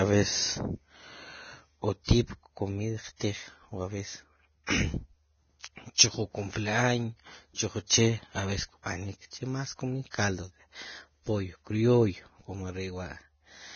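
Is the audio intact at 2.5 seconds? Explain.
No. At 2.5 seconds the speech carries the same damage as the rest of the clip: heavy compression, likely Vorbis, at a rate the sound suggests is somewhere near 18 kbps. With so few bits, the codec has cut everything above 6.6 kHz and quantised the remaining treble so coarsely that its fine detail turns into noise of similar energy. You hear that as a hissy, grainy top end, roughened tones and smeared attacks.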